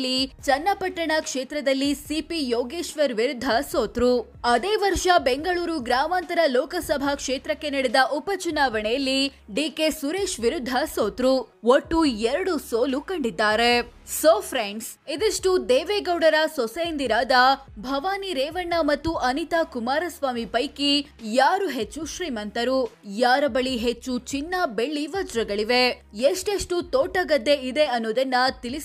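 No technical faults occur at any point in the audio, so there is nothing to describe in time order.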